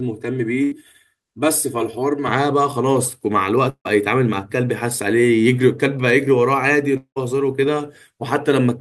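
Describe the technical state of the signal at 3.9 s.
From 3.69 to 3.87 s the sound smears into a fading buzz, then drops to silence; likely a long network dropout, with the lost stretch concealed and skipped.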